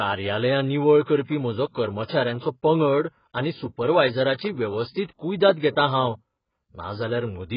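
From start to finish the speech sounds dull and smeared, with a warbling, fizzy texture on sustained sounds and sibilants, likely from heavy AAC compression at what sounds like a very low bitrate. The encoder saves bits by discarding everything above 5.1 kHz and coarsely quantising the rest. On a spectrogram this shows as a hard, flat ceiling at 5.1 kHz with blank space above, and patchy holes in the bands below.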